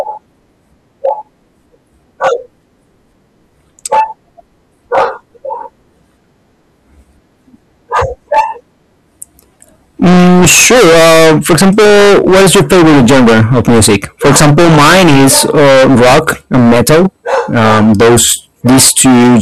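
From start to finish the speech is marred by hard clipping: the signal is driven roughly 28 dB beyond what the stage can pass, so about a fifth of all samples are pinned at the ceiling. Every loud syllable becomes a harsh, buzzing fuzz rather than occasional crackle. On a waveform the peaks are sliced into flat plateaus at both rails; a spectrogram shows dense harmonic smearing reaching far into the kHz range above each voiced sound.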